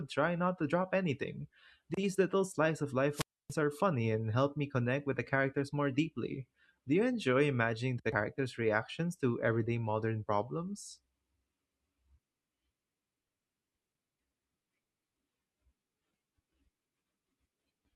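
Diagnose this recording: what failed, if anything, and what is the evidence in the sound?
The wireless microphone squelch dropout sits in the analogue radio link, before conversion. Just after "little slice of", at 3.11 s, hiss rises, then the sound mutes for about 283 ms and returns by 3.56 s. The RF signal faded, and the receiver's squelch cut the output.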